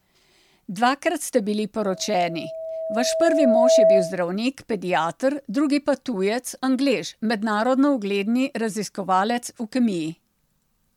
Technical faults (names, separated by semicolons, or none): generation loss; loudspeaker feedback squeal